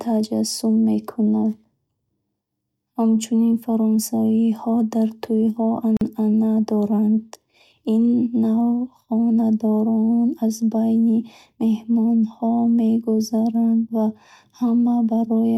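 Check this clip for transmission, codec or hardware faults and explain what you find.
One fault: a gap at a join of encoded pieces, from 5.97 to 6.01 s. The speech was encoded in separately coded pieces and joined without trimming, leaving one piece's padded last frame and the next piece's start-up delay in place. That opens a silence of about 44 ms, with smeared edges, before the speech resumes where it stopped.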